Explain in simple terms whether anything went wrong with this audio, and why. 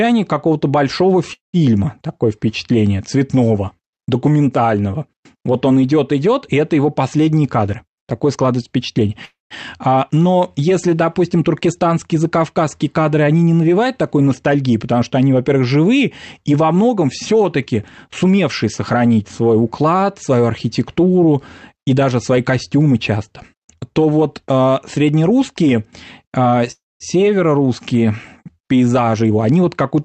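Call audio freeze at 1.33 to 1.56 s, 9.25 to 9.54 s, and 26.71 to 27.03 s (right after "вот а среднерусские а"). The sound stretches into a fading buzz, then goes quiet for about a seventh to a fifth of a second. The likely cause is delayed network packets leaving the receiver's buffer empty. Speech then resumes where it stopped, so nothing is lost, only delayed.

Jitter buffer speed-up at 7.61 to 9.09 s (just after "и это его последние"), 16.71 to 18.64 s (between "живые и во" and "сохранить свой уклад свою"), and 29.02 to 30.04 s. Speech runs 11 to 18 percent faster but keeps its pitch, so it sounds hurried. The receiver trims many tiny slices, about a fifth of a second in total each time, to catch up on built-up delay.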